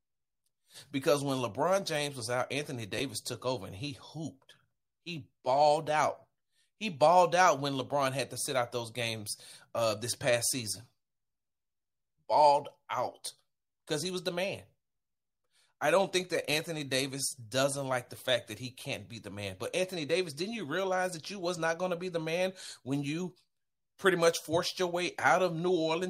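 At 2.98 to 3.00 s, just before "took over and he", chunks play out of order: one 10 ms chunk arrives one chunk late and plays after its successor. Nothing is missing, unlike a dropout, so the jumble is heard as a brief garbled moment.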